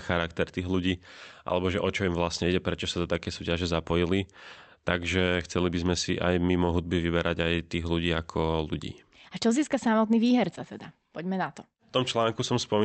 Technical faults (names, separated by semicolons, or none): none